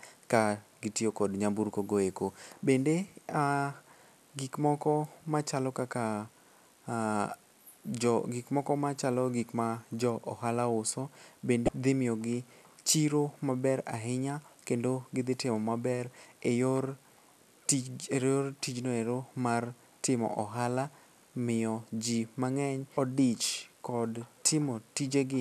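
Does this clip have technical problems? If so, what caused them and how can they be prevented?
Yes. Two brief glitches cut into the speech, from 11.65 to 11.69 s and at 22.96 s. Both are damaged data in a compressed stream: corrupted bytes made the decoder misread frames, lose sync and search for the next frame header. Checksummed transfers and error-protected storage prevent this.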